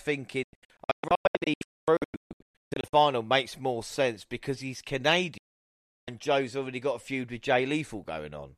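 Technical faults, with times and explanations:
0.43–2.94 s: digital broadcast dropout. The receiver repeatedly muted bad frames, leaving about 1.7 s of holes (longest 240 ms) with 3 ms fades. These appear as blank vertical gaps in the spectrogram and a flat waveform.
5.38–6.08 s: digital broadcast dropout. A single 0.7 s mute after lost frames, with a 3 ms fade. It shows as a clean silent block across all frequencies before the speech resumes.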